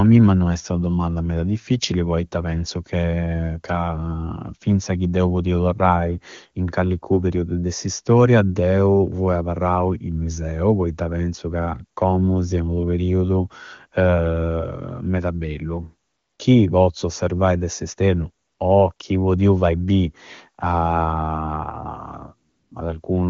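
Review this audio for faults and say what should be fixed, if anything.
AMR comfort noise cuts in four times: 16.07 to 16.39 s, 18.45 to 18.59 s right after "pozzu osservai de s'esternu", 18.93 to 18.99 s between "osservai de s'esternu o" and "podiu fai bi", and 22.49 to 22.71 s. In each gap the phone decided nobody was talking, stopped sending speech frames, and the far end swapped the real background for a smooth synthetic hiss. Those short pauses (60 to 320 ms) make it pump in and out. To prevent it, disable DTX on the link or loosen the voice-activity detector so brief mid-sentence pauses don't trigger it.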